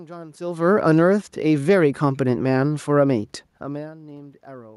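Automatic gain rising from 1.06 to 2.3 s: the gain control judged the input too quiet and lifted it by about 4 dB, so speech and room noise swell together.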